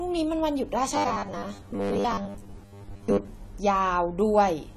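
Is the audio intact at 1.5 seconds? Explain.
No. From 0.95 to 3.27 s there is robotic sound from repeated short buffers. A short slice likely keeps being replayed while most of the real audio is skipped. This forces a rigid, metallic buzz at 100 Hz, which fits a 10 ms buffer. The whole clip also has plainly audible AAC compression. Nothing is heard above 13.9 kHz, and the dull, smeared texture points to a low bitrate of about 32 kbps, likely AAC-LC.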